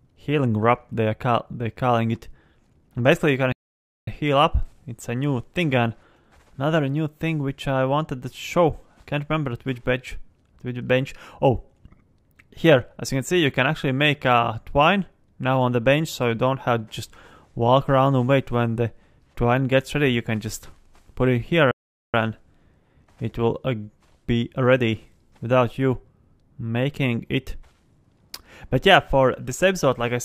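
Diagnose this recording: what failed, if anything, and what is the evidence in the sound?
Playback failed twice with a playback stall: the sound halts in mid-flow from 3.52 to 4.08 s (about 0.55 s) and again from 21.71 to 22.14 s (about 0.42 s), then carries on. The likely cause is the player's output buffer running dry or its thread being blocked, so nothing reached the converter until it recovered. On a waveform each gap is a flat line cut abruptly into ongoing signal; a spectrogram shows a clean vertical blank band across all frequencies.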